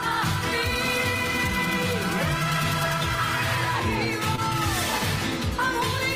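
At about 4.35 to 4.40 s, roughly 20 ms of audio failed to reach the decoder in time, a short concealed packet loss. The receiver patched the gap with about 22 ms of extrapolated sound before blending back, heard as a brief smear or wobble.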